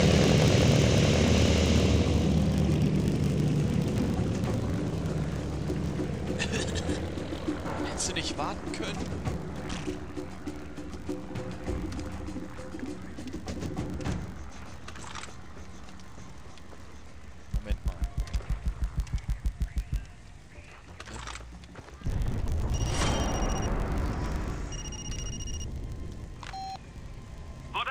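Throughout, a filter restarted on every block leaves a transient at each boundary, a 50 Hz buzz that rises and falls with the sound's level, unlike steady mains hum.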